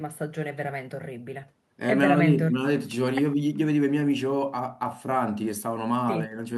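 No technical faults can be heard anywhere in the speech recording. There is nothing here that needs a time or a fault description.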